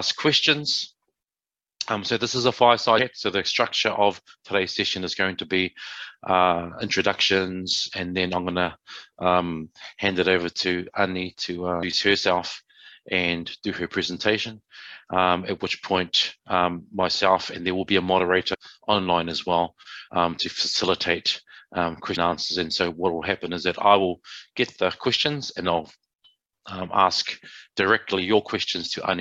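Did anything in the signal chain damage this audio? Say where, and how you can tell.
Yes. Damaged data in a compressed stream, at the codec stage: brief blips at 2.97, 11.82, 18.53–18.55 and 22.15 s, where the decoder misreads corrupt frames and then resyncs.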